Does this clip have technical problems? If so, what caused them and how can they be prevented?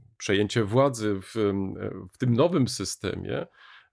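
No, nothing in this speech clip points to a technical fault, so there is no cause to trace and nothing to prevent.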